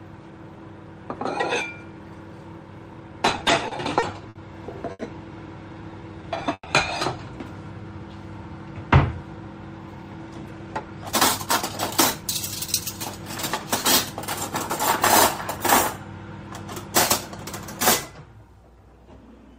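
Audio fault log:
3.28–4.36 s, repeated stalls (stutter): packets kept arriving late, so the jitter buffer emptied seven times in about one second. Each gap, the longest 60 ms, was bridged by continuing the last sound, 160 ms in all, about 15% of the span, so the sound drags and stutters with nothing lost.
4.91 s, short stall from a late packet: one packet missed its playout time and the buffer ran dry. The receiver stretched the last sound for 80 ms, then resumed where it left off, so a sound is held too long with a faint buzz or dip, adding 80 ms of delay.
5.69–6.43 s and 7.65–7.99 s, jitter buffer slow-down: with the buffer low or its target delay raised, the receiver repeated single pitch periods and pause fragments to rebuild its reserve, adding 80 ms and 47 ms. Playback runs at about 90% and 89% speed at unchanged pitch, drawing sounds out.
6.53–6.67 s, call audio freeze: packets were likely held up in transit, emptying the buffer. 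The last sound was carried on as a fading buzz or hiss for 130 ms, ending in about 40 ms of silence, and the audio then continued from the same point, inserting a gap with nothing missing.
9.79–12.81 s, jitter buffer speed-up: the buffer held more audio than its target, so the receiver cut out short pieces of one or a few pitch periods again and again, removing roughly 0.3 s. The sound runs about 9% fast at the same pitch and feels hurried.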